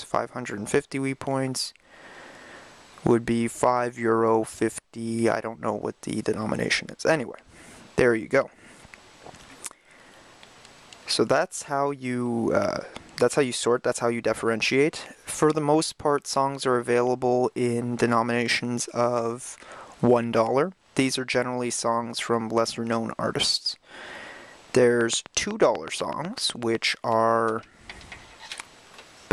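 From 25.01 to 26.76 s, a steady ticking of about fifteen sharp, near-identical pops at 8 per second cuts across the audio, peaking roughly 10 dB above the surrounding sound. This train of clicks is likely interference from nearby equipment or a faulty connection or power supply injecting repeated pulses.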